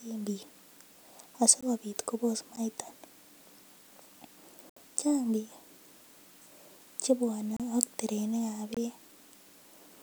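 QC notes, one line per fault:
1.61 s, 2.56 s, 4.70–4.76 s, 7.57–7.60 s, 8.74–8.77 s, block of digital silence: sharp ticks at the two shortest, short dropout holes at the rest, the longest (70 ms) just before "chaang biik". The output buffer likely went unfilled and was zeroed without fades; the 23 ms gap fits a 1024-sample block.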